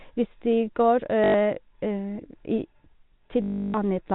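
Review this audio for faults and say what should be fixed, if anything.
Packet loss with last packet repeated shows up at 1.24 to 1.34 s (100 ms) and again at 3.42 to 3.74 s (320 ms). Each time the same short slice of speech is replayed out of step with the pitch, and the longer run buzzes at about 50 Hz, which fits 20 ms packets. A plain dropout would leave silence, whereas this leaves a robotic stutter. Over the G.711 telephone coding, band-limited to 4 kHz, this should be fixed by adding jitter buffering and proper loss concealment or forward error correction.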